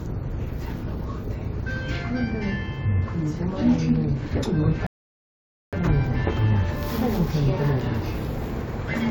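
At 4.87 s a rebuffering stall cuts the sound to silence: playback exhausted its downloaded audio and waited for more. At 5.73 s it resumes exactly where it stopped, adding about 0.86 s. On a waveform or spectrogram this shows as a flat, empty gap.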